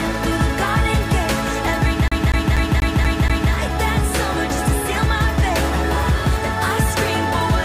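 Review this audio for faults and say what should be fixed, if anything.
From 2.08 to 3.52 s the sound is caught in a CD stuck on one turn. A scratch keeps throwing the laser back one track, so the same 0.24 s slice of audio plays six times, with a brief mute at each jump. On a waveform this looks like identical blocks spaced evenly, with a thin gap at every seam. A spectrogram shows the same pattern tiled across that stretch. Ripping with an error-correcting tool from a clean disc, and re-reading any sector that fails, would prevent it.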